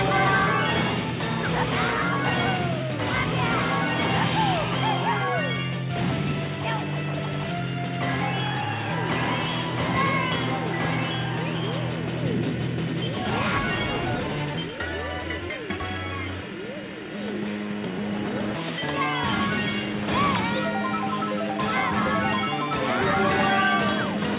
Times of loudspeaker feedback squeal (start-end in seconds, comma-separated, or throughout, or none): none